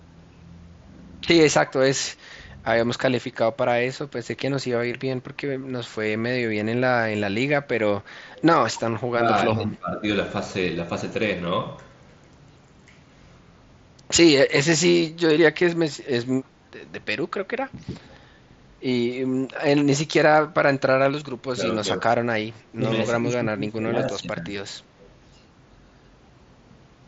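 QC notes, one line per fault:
1.67–2.76 s, 9.13–10.07 s, 17.71–18.26 s, 21.54–22.07 s and 22.69–24.53 s: speech suppressed in double talk. The voice dips by about 10 to 20 dB in patches. The likely cause is an echo canceller that mistook overlapping far-end talk for echo and turned everything down.
4.92 s: concealed Bluetooth headset packet loss. A 15 ms gap, which fits two lost headset frames, is filled by repeating the last stretch of waveform. This leaves only a brief buzzy flicker and a small warble as real audio resumes.
8.37–8.80 s, 18.13–18.17 s and 25.01–25.09 s: echo leak. A copy of the voice returns 310 ms late. It is about 20 dB down in the first instance and about 35 dB down in the two brief scraps. This is likely residual loudspeaker pickup passed back through an incomplete echo canceller.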